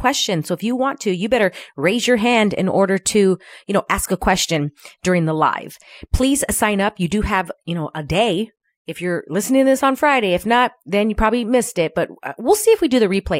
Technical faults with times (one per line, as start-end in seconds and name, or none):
none